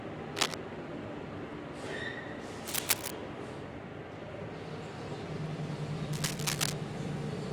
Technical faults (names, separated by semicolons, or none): cable scratch noise